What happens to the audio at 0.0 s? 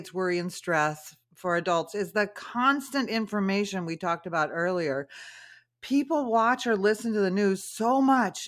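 At 0.0 s the audio is intact, with no dropout, click or distortion at that moment.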